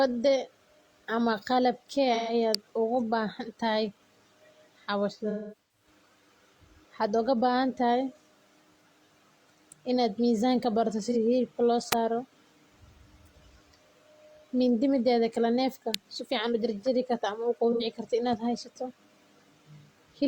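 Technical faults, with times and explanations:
2.14–2.33 s: AAC frame loss with concealment. A smeared, noisy patch just before "uga baahantahay". The decoder rebuilt about 128 ms, which fits three lost frames, from the last good spectrum.
2.55 s: electrical switching spike. A sharp snap sits on top of the speech, still before "uga baahantahay". It is likely a nearby switch arcing into the line.
5.30–5.87 s: AAC frame loss with concealment. Phasey, smeared stretches are spread across about 430 ms, with about 340 ms concealed in all. The longest gap runs to roughly 200 ms, and each gap is filled from the previous spectrum.
11.10–11.16 s: AAC frame loss with concealment. A brief smeared blur falls between "inaad mizaanka barata" and "hilibka loo". About 43 ms was patched, which fits one lost frame.
11.92 s: electrical switching spike. An abrupt transient is layered over the audio, likely the kind an arcing contact induces in the line.
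15.94 s: electrical switching spike. A sharp snap is added on top of the speech, again consistent with a switching arc picked up by the line.
17.72–17.83 s: AAC frame loss with concealment. A short noisy, phasey smear covers about 85 ms, which fits two lost frames filled in from the last good spectrum.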